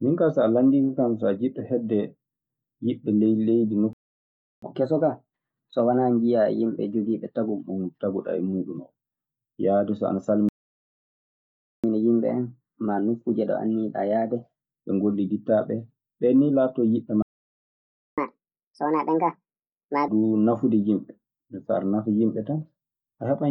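Speech that cuts out three times, each silence followed by a spell of fast, raised playback. The playback stalls run from 3.93 to 4.62 s (0.69 s), 10.49 to 11.84 s (1.35 s) and 17.22 to 18.18 s (0.95 s). The likely cause is the player running dry of buffered data or having its thread blocked. Unlike a dropout, where a piece of audio is simply lost, the speech halts mid-flow and then resumes from the point where it froze. Each stall is followed by catch-up at higher speed as the player resamples its backlog to win back the lost time. From 4.62 to 7.62 s and again from 11.84 to 14.84 s it runs at 1.1 times normal speed, raising the pitch by about one and a half semitones. From 18.18 to 20.08 s it runs at 1.5 times, roughly seven semitones up. What separates this from a deliberate pitch shift is that tempo and pitch rise together and then snap back to normal once the catch-up ends.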